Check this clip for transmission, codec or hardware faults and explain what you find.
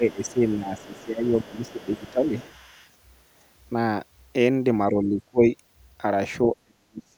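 Two echo-cancellation faults are audible, both pointing to trouble with simultaneous talk.

Speech suppressed in double talk occurs from 0.0 to 2.33 s, 4.91 to 5.43 s and 6.53 s to the end. The canceller likely mistook overlapping speech for echo and attenuated it. Dips reach about 15, 25 and 40 dB, heard as sudden fading. On the waveform the envelope sags.

The other side's voice leaking through appears from 0.24 to 2.11 s and 2.42 to 2.89 s. Echo the canceller likely failed to remove reaches the microphone roughly 30 dB below the main speech as a faint second voice. On a spectrogram it shows as weak harmonic traces beneath the louder ones.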